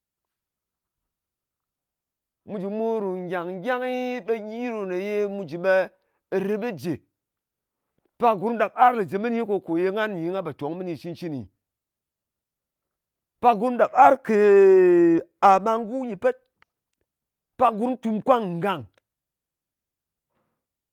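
Nothing goes wrong anywhere in this speech recording, so there's simply nothing to point out.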